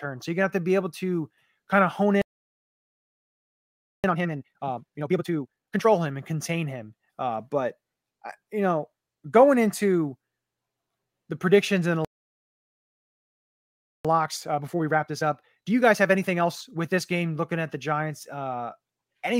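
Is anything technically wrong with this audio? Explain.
Yes. The speech breaks off twice and then rushes to catch up.

The first playback stall runs from 2.22 to 4.04 s, just after "to kind of hone", a silence of 1.82 s. The second runs from 12.05 to 14.05 s, after "the predictions and the", and lasts 2.0 s. The likely cause is that the player's buffer ran dry or its thread was held up, so output stopped in mid-phrase. On a waveform each stall is a flat gap, and on a spectrogram it is a blank vertical band.

Time-compressed catch-up follows each stall. From 4.04 to 5.86 s the speech plays at 2x, and from 14.05 to 17.05 s it plays at 1.25x. The player cut out small slices and cross-faded the joins to clear its backlog. Pitch stays normal, but the delivery sounds hurried, most obviously in the 2x stretch. A spectrogram shows syllables packed closer together with the harmonic spacing unchanged.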